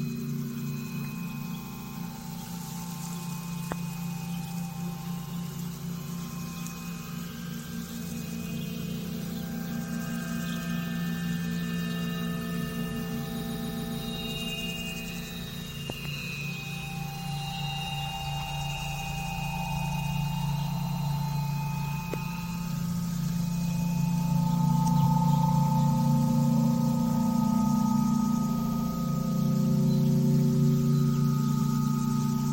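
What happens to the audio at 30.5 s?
Nothing goes wrong at 30.5 s; the audio plays through that moment intact, with no dropout, click or other fault.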